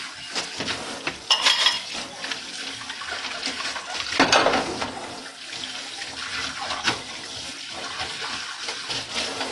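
From start to finish the audio sounds dull and smeared, with nothing above 11.5 kHz, and the damage is plainly audible. That's likely AAC compression. The coder runs short of bits, so it lops off the top end and coarsens the rest, which fits a low bitrate around 32 kbps.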